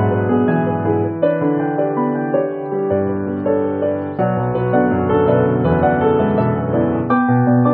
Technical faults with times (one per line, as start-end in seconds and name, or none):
2.37-6.81 digital radio blending to analogue